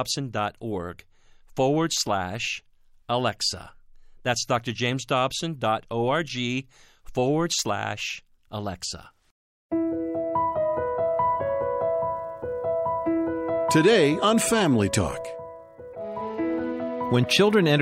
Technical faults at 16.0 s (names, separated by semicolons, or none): broken MP3 bit reservoir